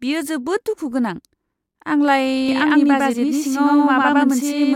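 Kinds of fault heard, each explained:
Doubled audio track: from 2.49 s onward an equal-level copy trails by about 100 ms, starting abruptly with no decay, likely from a slower second capture path.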